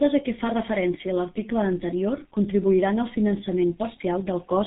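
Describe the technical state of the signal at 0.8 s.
At 0.8 s the speech sounds muffled and hoarse, with smeared consonants, as it does throughout the clip. This is G.723.1 codec damage: nothing above 3.8 kHz survives, and the slowly updated 30 ms voice model, consistent with a bitrate near 6 kbit/s, blurs fast detail.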